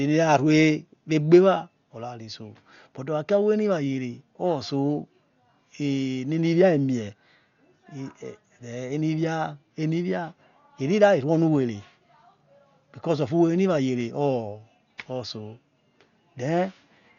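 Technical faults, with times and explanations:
Throughout, Dolby Digital compression damage: the speech sounds heavily dulled, with nothing above 7 kHz and a rough, fluttering hiss clinging to voiced sounds. This is likely AC-3 coding starved of bits, which fits a bitrate around 48 kbps. The encoder cuts the band and leaves many frequency lines without mantissa data, so the decoder fills them with noise. A spectrogram shows a hard ceiling at 7 kHz and speckled, blocky noise between harmonics.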